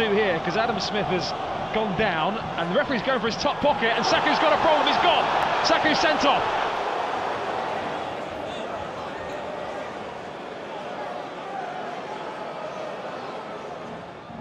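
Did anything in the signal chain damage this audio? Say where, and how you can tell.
Yes. Four isolated sharp clicks occur at 3.63, 5.43, 6.77 and 9.33 s. Each is a single tick with nothing audibly missing around it, and on a spectrogram each shows as a thin vertical line. These are dropped samples, likely lost at the driver or buffer stage. A fraction of a millisecond of the stream goes missing, so the waveform jumps straight to a later value, and that step is heard as a click.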